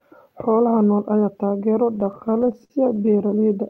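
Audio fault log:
1.95–3.14 s, repeated stalls (stutter): network packets reached the receiver later or more slowly than the audio was being played, so its jitter buffer kept running dry, 18 times in just over a second. Each time, the last stretch of speech was extended to cover the wait, 225 ms in all and nearly a fifth of that span, with the longest gap 58 ms. No speech is lost, but the voice hitches and drags in short, repeated catches.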